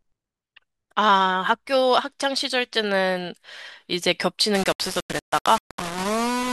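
From 4.55 s to the end of the clip at 6.53 s, the speech turns harsh and grainy, with a gritty distortion that rises and falls with the voice and leaves quieter stretches sputtering or dropping out. This is low bit depth without dither, likely from the signal being rounded to very few levels, consistent with about 4 bits, with no dither. The error tracks the waveform, sitting only around 10 dB below the speech.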